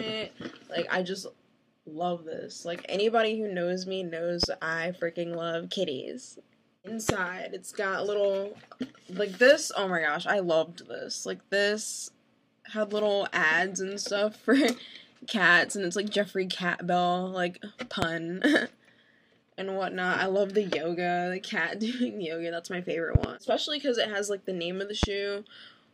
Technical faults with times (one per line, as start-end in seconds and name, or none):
4.43-4.46 loud pop
7.09-7.12 loud pop
18.02-18.05 loud pop
23.15-23.26 loud pop
25.03-25.06 loud pop